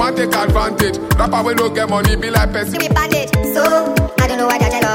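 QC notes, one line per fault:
2.75–4.95 s, section at the wrong speed: from 2.75 s to the end, the audio runs about 1.47 times faster than the preceding material, so timing compresses and pitch rises by roughly seven semitones in the same step. Because speed and pitch shift together and abruptly, the section sounds hurried and raised against what came before. The likely cause is this stretch being played or rendered against a mismatched clock.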